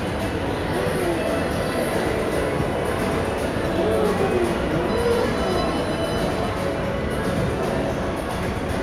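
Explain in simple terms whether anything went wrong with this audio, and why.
Nothing stood out as a problem when listening to this recording of sounds.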